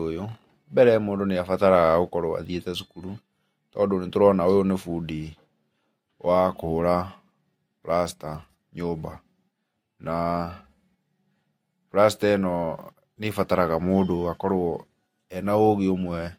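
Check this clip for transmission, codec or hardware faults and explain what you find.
One hardware fault stands out: sample clock jitter, from 1.46 to 3.64 s. The converter's clock wanders by around a microsecond, so each sample is taken slightly early or late at random. A timing error turns into an amplitude error in proportion to how fast the waveform is changing. Here that error sits around 45 dB below the signal. It is heard as a hiss or roughness riding on the speech, strongest on loud and high-frequency sounds, and it disappears in the pauses.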